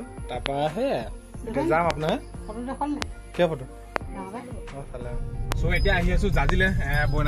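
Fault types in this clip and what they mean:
Loud pop: at 0.46, 1.9 to 2.11 (a double pop), 3.02, 3.96, 5.52 and 6.49 s, sharp clicks jump roughly 20 to 25 dB above the sound, which continues underneath, likely from voltage spikes caused by a switch, loose plug or static discharge.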